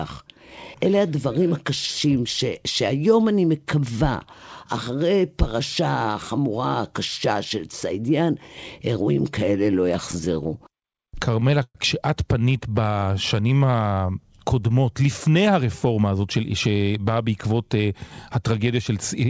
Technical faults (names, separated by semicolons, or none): repeated stalls (stutter); jitter buffer slow-down; jitter buffer speed-up